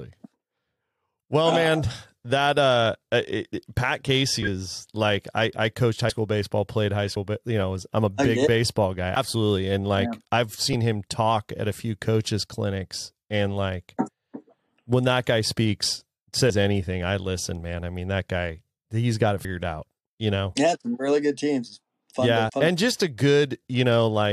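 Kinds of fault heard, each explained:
Compressed frames skipped: whole frames of the coded speech never reach the output, so the audio leaps forward by roughly 20 to 100 ms at 4.41–4.47, 6.09–6.11, 7.04–7.17, 9.15, 10.71–10.74, 16.49, 19.44 and 22.48–22.51 s. The waveform shows an abrupt shift in envelope. The spectrogram shows a sudden discontinuity in the harmonic tracks.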